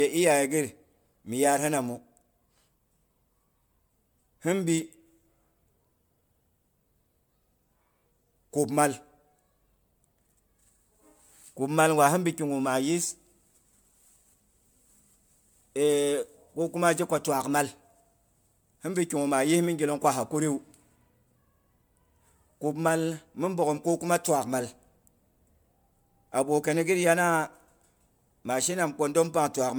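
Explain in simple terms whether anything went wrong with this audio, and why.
Something did go wrong, and it lasts the whole clip. The speech sounds swirly and hollow, as if heard through water. The starts of sounds are soft and smeared instead of crisp. This is generation loss. The recording was likely saved as an MP3, opened, and saved again, perhaps around seven times. Each save throws away a little more detail in slightly different places, so the damage builds up.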